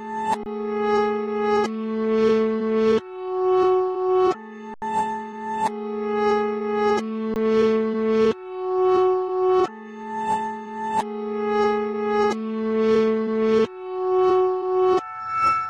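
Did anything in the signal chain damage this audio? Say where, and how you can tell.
Yes. An underrun with held sample in the output buffer: the sound freezes flat at 0.43–0.46, 4.74–4.82 and 7.34–7.36 s while the converter holds its last value.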